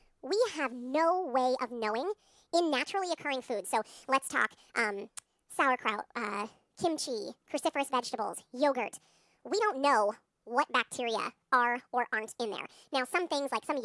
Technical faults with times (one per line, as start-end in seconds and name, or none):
0.00-13.84 wrong sample rate